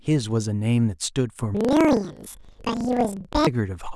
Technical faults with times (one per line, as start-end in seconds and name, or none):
1.55-3.49 planar audio read as interleaved